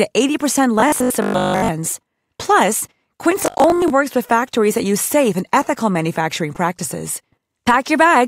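From 0.80 to 1.68 s, and again from 3.4 to 3.9 s, the speech turns into a rigid metallic buzz pinned at 50 Hz, with the words still roughly traceable. This robotic sound likely comes from repeated short buffers: audio arrived too seldom, so each 20 ms chunk was replayed, covering most of the first stretch and about half the second. Unlike dropouts, nothing goes silent. The fixed buzz pitch sets it apart.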